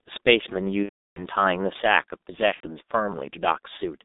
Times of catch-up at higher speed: none

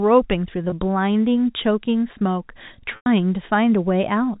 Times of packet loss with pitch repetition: 0.70-0.72, 2.96-3.06

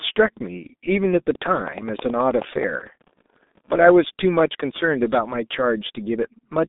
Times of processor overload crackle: 2.80-3.73

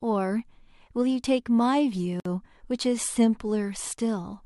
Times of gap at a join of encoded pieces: 2.20-2.25

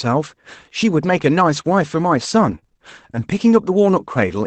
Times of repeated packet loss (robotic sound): 2.47-2.81

